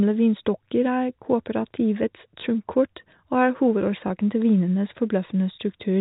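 At 4.08 s, right before "til vinenes", there's a tiny glitch in the speech: packet loss with the last packet repeated. About 20 ms of audio went missing, which fits a single lost packet, and the receiver filled the hole by replaying the previous chunk. The replayed piece comes through as a small blip rather than a gap. The telephone band and faint fizz of the G.711 coding sit under all of it.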